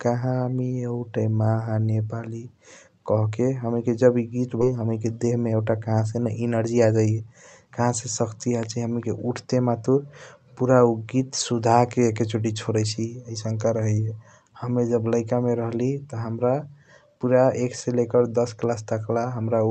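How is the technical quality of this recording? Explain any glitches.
The recording has one skip ahead and two jitter buffer speed-ups in its first eight seconds; the Opus path band-limits the sound at about 8 kHz.

At 4.61 to 4.72 s, right after "हणीके जब ई गीत", there is a skip ahead. Roughly 0.7 s of speech was discarded while later audio was already queued, so the two sides join almost seamlessly. Unlike a dropout, there is no silence or fill, only a sudden jump in content.

From 5.16 to 5.60 s and from 6.50 to 7.80 s, just before "से सकती आजाइया हम्नीके", the jitter buffer speeds up to 112% and then 113%. It trims tiny pitch-period slices to shed excess queued delay, about 70 ms and 200 ms. The speech sounds hurried, but unlike a playback-rate error, the pitch stays unchanged.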